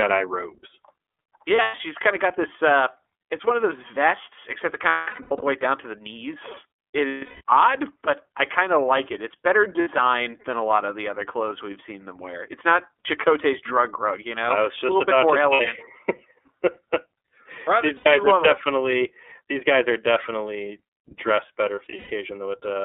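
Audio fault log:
Throughout, iLBC codec: The sound is narrowband, passing only about 300 Hz to 3.5 kHz. It is coded at 13.33 kbps in 30 ms frames, each coded on its own. The damage is plainly audible as a rough, synthetic edge on the speech.
1.56–1.81, 4.89–5.44, 7.08–7.41, 9.81–9.88, 13.00–13.06, 15.53–15.61, 17.97–18.07 and 21.75–22.11 s, lost iLBC frames: About 60 to 420 ms of audio is missing in each gap. The longest comes between "those vests except it" and "way down to the". Others fall before "kind of got this" and "than a lot of". The decoder repeats the last pitch cycle mixed with noise and fades it over longer losses, so each gap sounds like a held, buzzy or breathy vowel. Because the frames stand alone, the speech returns clean almost at once.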